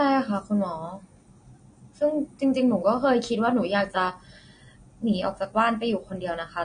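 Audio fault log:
Throughout, AAC compression: a low-bitrate AAC-LC encode, consistent with roughly 32 kbps, is the likely cause. The encoder discards everything above 9.7 kHz and quantises the remaining spectrum coarsely, so the speech sounds dull, smeared and plainly warbly on sibilants.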